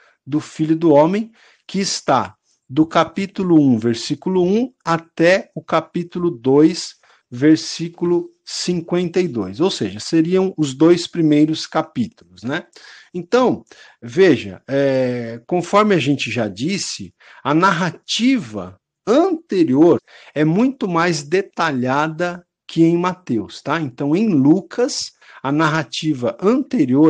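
The clip is speech, with one fault: a stream segment skipped at 19.97 to 19.99 s, just before "é muito mais detalhada". The audio jumps abruptly forward with a short blip, and a stretch of the programme is gone. The likely cause is a segment of a segmented stream that failed to load, so the player carried on with the next one. On a waveform the envelope changes suddenly at the splice, and a spectrogram shows a thin vertical broadband line where the harmonic patterns break off and restart mismatched.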